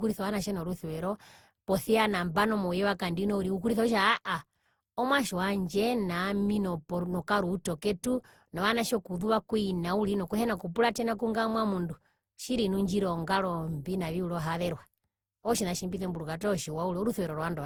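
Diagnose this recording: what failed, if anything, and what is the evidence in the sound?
The failure is at the codec stage and is likely generation loss: the speech appears to have been decoded and re-encoded through a lossy codec around ten times, with a character that fits Opus at 64 kbit/s. Each pass requantises on a shifted frame grid, so errors and spectral gaps compound. Throughout the clip the speech sounds swirly, smeared and hollow beyond what that bitrate alone would give, with blurred consonant attacks, even though content extends up to about 20.2 kHz.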